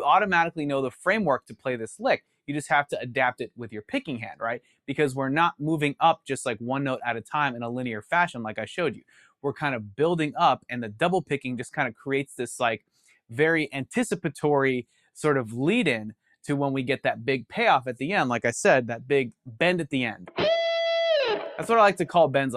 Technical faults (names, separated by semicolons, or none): sound cut by the noise suppressor